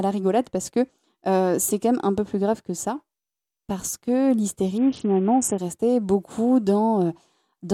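From 4.78 s to 5.58 s the Bluetooth link appears to have congested, and the sender answered with a Bluetooth SBC bit pool drop, cutting the encoder's bit budget steeply, which fits a fall from a bit pool near 28 to one near 6, around 60 kbps. Starved of bits, the upper sub-bands lose most or all of their share and the remaining bands are quantised coarsely, so the speech turns dull and muffled, with a gritty, grainy noise riding on it for that stretch before the fuller sound returns.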